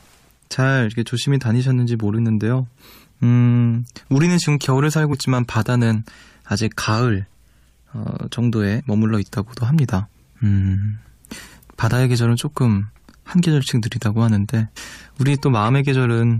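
Compressed frames skipped at 2.17, 5.12, 8.79 and 14.76 s: the speech jumps forward where whole coded frames were missing or rejected by the decoder as damaged. The skips span roughly a tenth of a second, a fiftieth, a twentieth and about 150 ms, which fits losing about four, one, two and seven frames of 23.2 ms. Overlap between neighbouring frames softens each join into a short smeared blip instead of a sharp click.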